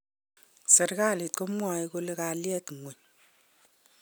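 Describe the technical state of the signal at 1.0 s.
At 1.0 s the speech signal is intact, with no dropout, clipping, glitch or other technical fault at that point.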